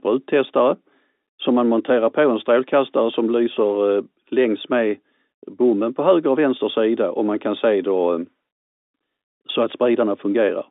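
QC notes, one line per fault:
No faults heard.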